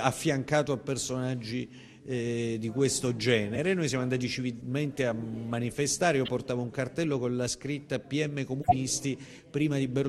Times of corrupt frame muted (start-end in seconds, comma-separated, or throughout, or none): 6.25-6.30